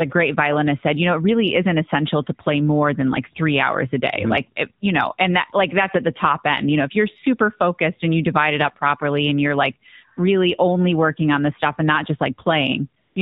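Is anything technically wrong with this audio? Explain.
Yes, two faults are audible: mobile-codec coding throughout, and a brief patch of comfort noise at the very end.

The whole clip carries plainly audible AMR narrowband mobile codec damage. The codec samples at 8 kHz and rebuilds the voice from a vocal-tract model excited by a handful of pulses per subframe, so nothing above 4 kHz survives. The speech sounds boxed-in, buzzy and synthetic, which fits the 7.4 kbps mode. On a spectrogram, energy stops at a hard ceiling at 4 kHz, and the harmonics below it look smeared and coarse.

From 13.02 to 13.16 s, about 140 ms, AMR comfort noise replaces the signal. The phone judged the talker silent and stopped sending speech frames. The receiver then generated smooth synthetic noise from a rough description of the background's level and spectrum. It is heard as a sudden switch to a flat, even hiss. 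On the waveform this shows as a short block of uniform low-level noise, and on a spectrogram as a featureless band below 4 kHz.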